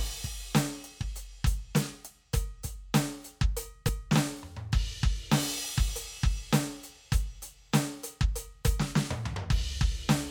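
At 3.89 s and again at 9.36 s the music skips forward. These are compressed frames skipped: about 30 ms of audio is lost each time, which fits a single 32 ms frame being dropped.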